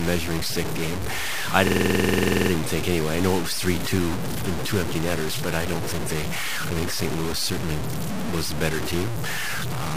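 Speech runs throughout with a harsh, grainy distortion that rises and falls with the voice and leaves quiet stretches sputtering or dropping to silence, likely low bit depth without dither, around 5 bits truncated, with the error nearly as loud as the speech. Unlike added hiss, which would stay steady, this grit tracks the signal. From 1.67 to 2.51 s, between "stick game I" and "think anyway I know", a system hang loop repeats one 46.44 ms slice 18 times, a machine-gun stutter at 21.5 Hz that fits a 2048-sample ring buffer. Unlike a codec concealment glitch, the repeats are identical, and speech resumes where it stopped, with almost nothing missing.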